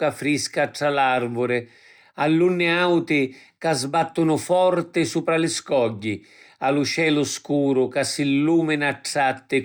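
A speech recording with no audible technical faults anywhere in the signal.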